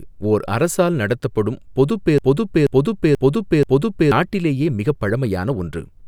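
At 2.18 s, right after "ஓர் அரசால் நடத்தப்படும் பொதுப்", the speech falls into a broken-record loop. A 0.48 s fragment plays four times back to back until 4.12 s, and the speech resumes at "நாட்டிலேயே மிகப்". The likely cause is a player or stream stall that kept resending its last buffer. Unlike a stutter or echo, each pass is an identical copy with no decay, and the audio that should have filled those two seconds is gone.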